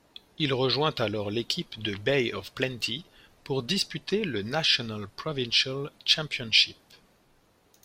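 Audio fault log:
No technical faults are present anywhere in the clip, and the signal holds steady throughout.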